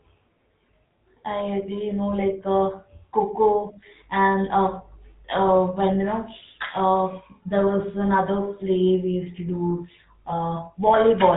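GSM full-rate codec damage runs through the whole clip. The speech has been coded by modelling the vocal tract and exciting it with a sparse, regularly spaced pulse train, which leaves a plainly audible buzzy, gravelly roughness. Nothing above about 3.8 kHz survives, consistent with a 13 kbps channel.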